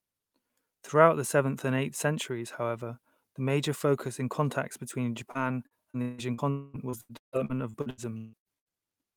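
A speech recording with choppy stretches of repeated packet loss (robotic sound). The first runs from 5.31 to 6.41 s, just after "focus in contacts between": five holes totalling about 0.3 s, the longest 162 ms, are bridged by looping the preceding sound, so 28% of that span is synthetic. The second, from 6.90 to 8.69 s, is worse, with twelve holes adding up to about 0.8 s, the longest 154 ms, and 43% of the span patched. On a spectrogram these show as repeated blocks of smeared, frozen harmonics with hard vertical edges; the waveform shows short copied-looking segments. Between them, from 6.50 to 6.77 s, a continuous 0.24 s stretch is filled with a sustained extension of the last sound that never falls to silence, likely a long network dropout where the receiver kept concealing the gap. On a spectrogram it appears as a single horizontally stretched band of energy that fades, and the waveform shows a repetitive pattern that fades before the speech resumes without the lost portion.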